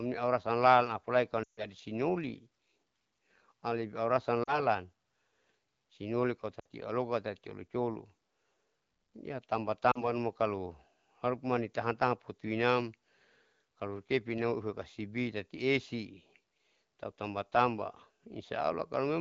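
Lost AMR speech frames at 1.43–1.66 s, 4.43–4.66 s, 6.59–6.65 s and 9.91–10.08 s, just before "numa kalo harupu mani". Failed frames made the wideband decoder stretch the last good sound with falling gain. Each gap drops to near silence, the first longest, suggesting about 140 ms lost.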